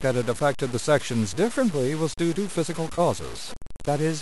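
Speech throughout carries a coarse, grainy distortion that rises and falls with the voice itself: louder syllables sound rough, and the quietest tails and pauses break up into a sputtering, stepped buzz or drop straight to silence instead of fading smoothly. That signal-following grit, with the error sitting only about 15 dB below the speech, points to low bit depth without dither, likely around 5 bits by truncation. Unlike steady hiss or a codec's swirly noise, it vanishes when the signal does. Between 2.95 and 3.00 s there is a brief smeared, noisy patch about 30 ms long where the sound goes phasey rather than cutting out. This is AAC frame loss with concealment, the gap fitting three lost frames of roughly 10 ms, with the decoder filling them from the last good spectrum. A hard dropout would leave a clean hole or click, but this one is papered over with blurred, noise-like sound. The low-delay AAC-ELD coding underneath likely adds only light roughness of its own.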